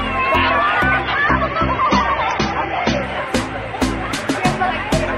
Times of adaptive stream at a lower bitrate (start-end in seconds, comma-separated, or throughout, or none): 1.03-3.03